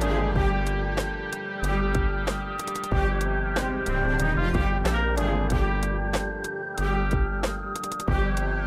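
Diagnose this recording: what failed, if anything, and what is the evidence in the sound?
Nothing failed; no fault is audible anywhere.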